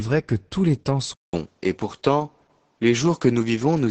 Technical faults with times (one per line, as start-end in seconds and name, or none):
0.00-3.91 Opus voice compression
1.13-3.91 input switched to a poorer device